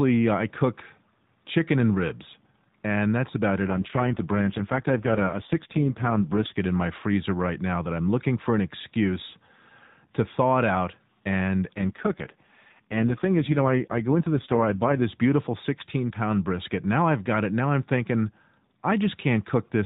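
Twice here you get an AMR rate drop. After "and that's about it" the speech goes rough and buzzy from 3.68 to 6.59 s, clearing by "in my freezer right". It happens again after "thaw it out and", from 11.74 to 15.02 s. The band stays narrow and nothing drops out. It's the network pushing the codec down, which fits AMR-NB falling from 12.2 kbps to its 4.75 kbps mode, so the voice turns synthetic until the rate comes back up.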